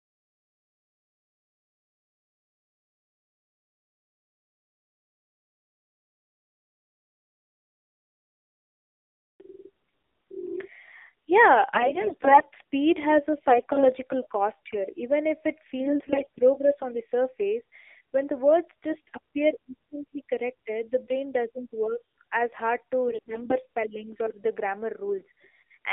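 From start to finish the speech has passed through the AMR narrowband mobile codec, the AMR-NB speech coder used on 2G and 3G calls. It rebuilds the voice from a vocal-tract model excited by a few pulses per subframe, and at this bit rate the result sounds buzzy and synthetic, which fits a low mode around 7.4 kbps. The audible band sits between roughly 300 Hz and 3.7 kHz. On a spectrogram, everything above that is an empty black ceiling and the lowest bass is gone.

AMR bit errors then corrupt the signal in four short bursts: 11.74 to 12.43 s, 13.50 to 13.87 s, 15.80 to 16.39 s, and 23.08 to 23.55 s. On a weak link, unprotected bits in the frames flipped while the checksum on the essential bits still passed. That misplaced the excitation pulses and skewed the finer gain and spectral values. The voice keeps its pitch and loudness but turns hoarse, scratchy and gargly; the first, third and fourth bursts are the more heavily hit. 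The waveform's envelope stays intact. The spectrogram shows smeared, noisy harmonics and speckled energy in place of clean formant bands.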